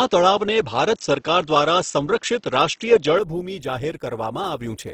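From the start to about 3.19 s, the speech sounds narrower and duller. Nothing reaches above about 7.3 kHz. A faint new noise floor sits far below the speech, and the level differs by a few decibels. This is likely an input switched to a poorer device. At 3.19 s the sound opens up again with no gap.

Across the whole clip the speech has a grainy, rough texture. Voiced sounds turn noisy rather than swirly, though the full bandwidth is kept. This points to a low bitrate, around 16 kbps. The likely cause is Opus compression in its music (CELT) mode, filling starved bands with noise.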